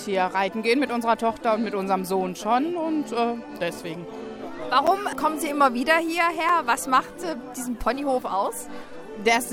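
Two blocks of digital silence interrupt the audio, at 4.87 s (about 7.7 ms) and 6.49 s (about 5.3 ms, which fits a 256-sample buffer). Each gap drops abruptly to silence and back, so it sounds like a tick or dip, likely from an output buffer not filled in time.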